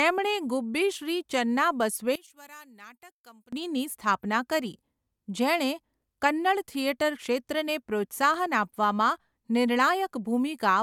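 From about 2.16 to 3.53 s the speech suddenly drops by about 24 dB and goes faint, as if most of it has been scooped out. That's the signature of one channel inverted: with one stereo side likely flipped in polarity, everything common to both sides cancels when they're combined, so the centred voice and low end nearly disappear. What's left is just the faint difference between channels.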